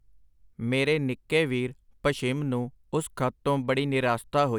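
No technical faults can be heard anywhere in the recording.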